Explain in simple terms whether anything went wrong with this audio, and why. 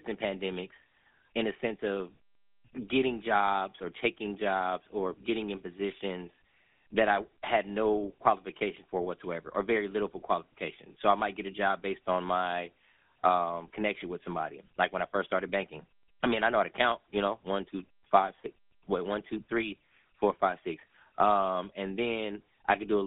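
Yes, something went wrong for the whole recording. The speech has passed through the GSM full-rate codec, the original mobile-phone voice coder. Instead of keeping the sound wave itself, it rebuilds each moment of speech from a simple model of the throat and mouth, driven by a coarse train of pulses. That shortcut gives the voice the clearly audible buzzy, gravelly roughness heard here. The phone line also limits the sound to about 200 Hz to 3.6 kHz, so it lacks depth and crispness.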